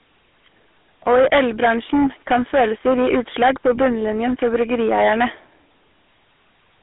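Throughout the speech, the GSM full-rate codec is plainly audible: coarsely modelled pulse excitation gives a buzzy, gravelly roughness. The band runs from about 250 Hz to 3.5 kHz, with nothing above 3.8 kHz, consistent with 13 kbps coding.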